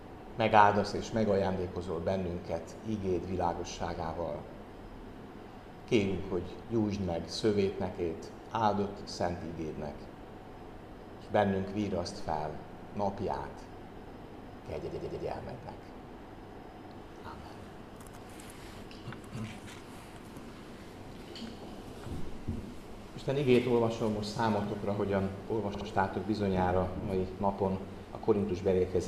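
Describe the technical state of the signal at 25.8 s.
Repeated frames occur from 25.74 to 25.87 s: a 64 ms block of compressed audio plays twice more, producing a stutter and adding 128 ms.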